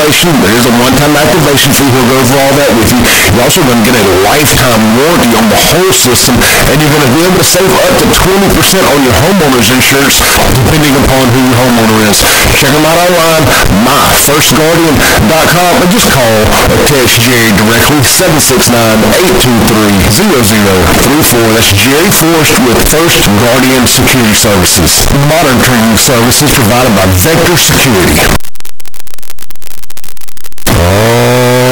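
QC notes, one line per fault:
Throughout, float read as integer: speech sits at an almost fixed, high level as a harsh, squared, very loud wave with noise equal to speech, likely 32-bit float samples decoded as 32-bit integers.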